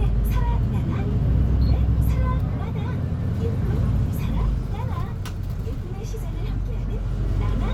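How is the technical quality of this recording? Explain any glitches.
The signal stays continuous and stable throughout, with no technical faults to be heard anywhere in the recording.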